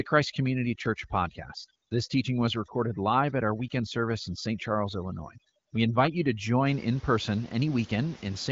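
From the start to 6.66 s, overdone noise removal is at work. A noise reducer set far too hard clamps any frequency band near its noise estimate, so room noise about 21 dB under the speech drops away, and faint parts of the speech go with it. The background breaks up into twinkling specks. A spectrogram shows black gaps between syllables dotted with isolated bright pixels, and patchy, ragged upper harmonics.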